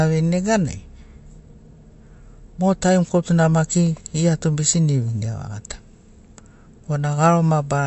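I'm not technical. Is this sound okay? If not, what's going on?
No. Throughout the speech, everything above 8 kHz is missing and the sound turns watery, which is likely MP3 compression squeezing the file too hard.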